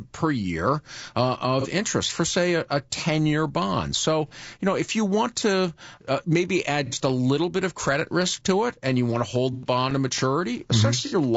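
Speech with a rough, grainy texture throughout, noise between the harmonics and a thin top band, likely from low-delay AAC compression at a bitrate near 32 kbps rather than ordinary background hiss. AAC frame loss with concealment leaves brief smeared, phasey patches at 1.61, 4.28, 6.86, 9.53 and 11.06 s, lasting about 30 to 90 ms, which fits whole lost 30 ms frames. These are filled-in gaps, not clicks or silent dropouts. Between 9.36 and 10.46 s, five CD scratch ticks, each under 2 ms, recur at a steady rotation-like rate, distinct from the longer concealment smear at 9.53 s.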